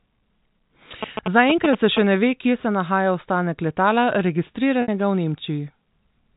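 From 1.03 to 1.99 s, just before "ne ve kje se", a galloping dit-dit-dit of short 217 Hz buzzes cuts in at nearly the level of the speech. These are GSM signalling bursts from a nearby 2G phone, which the audio circuitry rectifies.

At 4.82 s the speech briefly holds on a buzzy, repeated note, then fades and resumes. This is packet loss with pitch repetition. A 60 ms gap, which fits several lost packets, was bridged by looping the last pitch period and fading it out.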